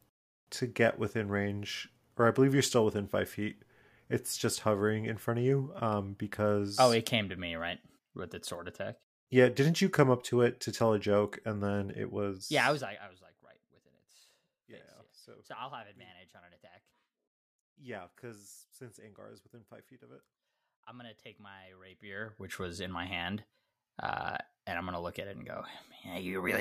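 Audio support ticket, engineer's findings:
Zipper noise, 12.35–13.19 s and 21.83–22.57 s. Ticking on speech during gain ramps, down then up, roughly 20 dB. Unsmoothed 2 dB steps, about twenty per second.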